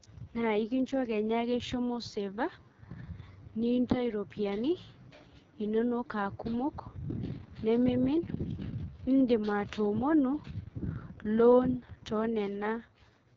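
Throughout the speech, the audio has passed through the AMR wideband (HD Voice) codec at what sounds like its lowest rate, which fits 6.6 kbit/s. At that rate the pulse-driven vocal tract model has too few bits to track the voice, so the damage is heavy: the speech comes out rough and raspy, with a gritty, buzzing edge. The top band is filled with synthetic noise, and nothing reaches above 7.5 kHz.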